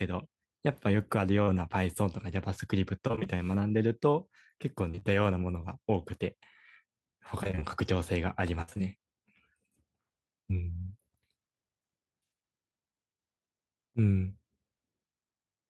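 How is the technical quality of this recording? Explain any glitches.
The recording is marred by network packet loss in several places, heard as brief smears and, in three stretches, choppy robotic sound.

Short concealed packet loss occurs at 1.43 s, where about 40 ms failed to arrive, and again from 4.91 to 5.03 s as three back-to-back gaps of about 20 ms each. In each case the decoder extended the preceding sound and then blended back into the real signal. The result is a momentary smear or wobble. On a spectrogram the harmonics flatten into a held, blurred patch. In the waveform a short cycle repeats with unnatural regularity.

Repeated packet loss (robotic sound) affects three spans. From 3.07 to 3.27 s there are five gaps, with about half the span concealed. From 7.43 to 7.64 s there are five gaps, again with about half concealed. From 8.62 to 8.81 s there are four gaps covering about 60 percent of the span, the longest 60 ms. 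Each hole is patched by continuing the previous sound, and the next loss follows almost immediately. The audio turns choppy, with pieces missing. A spectrogram shows a striped alternation of frozen, smeared bands and real content. The waveform shows repeated periodic chunks.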